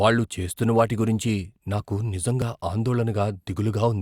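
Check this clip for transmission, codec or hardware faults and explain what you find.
One fault is present. At 2.42 s the speech jumps, a dropped buffer (overrun): samples were likely overwritten before the software read them, so a few milliseconds of audio, about 4 ms, vanish and the two sides butt together without silence.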